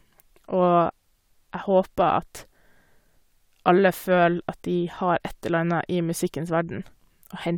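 No technical faults can be heard anywhere in the recording.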